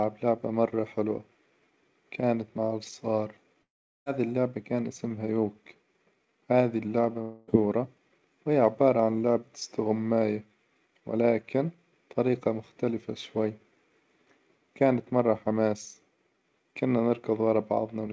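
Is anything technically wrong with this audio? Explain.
Yes. Long network dropouts occur from 3.62 to 4.08 s, after "كانت مع الصغار", and from 7.22 to 7.50 s, after "هذي اللعبة". Audio likely stopped arriving, so the receiver stretched the last sound into a fading buzz. In the first gap that fill decays into about 0.39 s of silence before "اللعبة كان اسمها" resumes. The second gap is filled throughout. About 0.44 s and 0.26 s of audio are lost. Across the clip nothing above 8 kHz is present, which fits a wideband call codec such as G.722.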